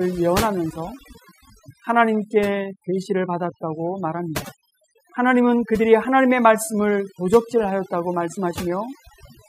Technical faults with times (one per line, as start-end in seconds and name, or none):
0.00-9.48 overdone noise removal